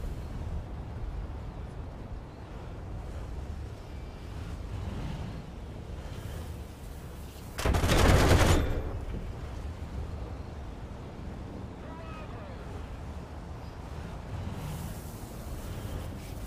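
A click or pop recurs every 0.6 s from 0.15 s to 16.34 s, around thirty in all, evenly spaced whenever there is signal. This regular ticking is the signature of clock drift buffer slips, likely caused by two devices running on independent clocks that disagree by a few hundred parts per million. The buffer between them gradually fills or drains until a handful of samples is dropped or repeated, and each such jump produces one click.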